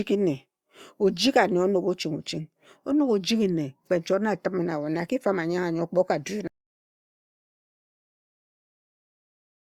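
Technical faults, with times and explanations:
6.48 to 9.66 s, audio dropout to silence: the speech cuts off mid-flow at 6.48 s and never returns, leaving about 3.2 s of dead digital silence through to the end of the clip, with no room tone or background hiss underneath. That absolute emptiness is the giveaway; the signal feeding the recorder was likely lost, through a disconnected device, a failed link or an accidental mute, while the recorder kept writing silence. Whatever was said after the cut is unrecoverable.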